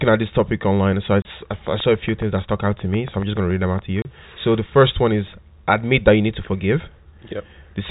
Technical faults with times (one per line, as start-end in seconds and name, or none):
1.22-1.25 packet loss filled with silence
1.67-3.80 train of clicks
4.02-4.05 packet loss filled with silence